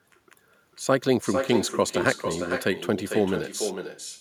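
Echo with no canceller runs throughout: each phrase returns about half a second later, roughly 7 dB quieter and thinner, picked up from the far-end loudspeaker.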